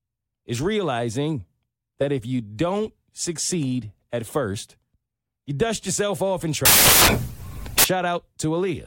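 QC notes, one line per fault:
6.65–7.84 s, samples built from the wrong bytes: for a little over a second the speech is swamped by loud, harsh broadband noise. The reader is stitching each sample's bytes together wrongly here, off by a byte or in the wrong order, so the fast-flickering low bits end up as the big part of every value. That random jitter blown up into large values is what you hear as the noise.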